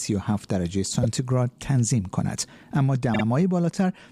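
Repeated frames occur twice, where compressed frames were delivered more than once and the decoder replayed the same slice of audio. At 1.02 to 1.05 s a 24 ms block, consistent with a single frame, plays one extra time, adding 24 ms as a brief stutter. At 3.13 to 3.23 s a 48 ms block repeats twice, adding 96 ms and producing a judder.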